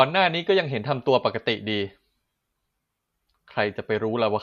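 Speech recording with no technical faults detected anywhere in the audio.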